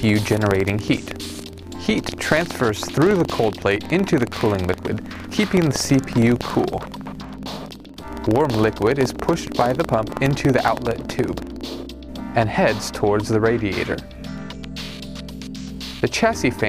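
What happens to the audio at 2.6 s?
A rattling, robotic buzz at about 21.5 Hz runs through the sound from 0 to 11.68 s: buffer tearing, consistent with a 2048-sample buffer splicing in audio from around 200 ms earlier.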